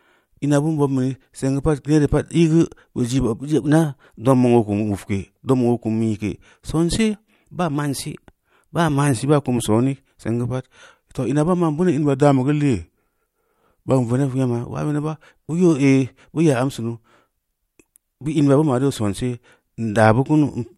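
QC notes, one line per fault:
3.41–4.34 s, 7.75–9.13 s (after "sensel baa", before "si baa") and 12.02–14.08 s: drift correction step. Speech speeds up 6.4% and rises 107 cents, then in the last run slows 6.4% and drops 115 cents. This is likely clock-sync software abruptly resetting playback rate.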